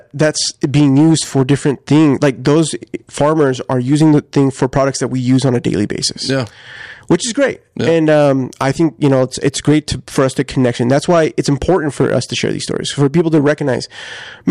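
Crackle and roughness ride on the louder speech peaks throughout, from hard clipping: about 4 dB of overdrive flattens the tops of a few percent of samples.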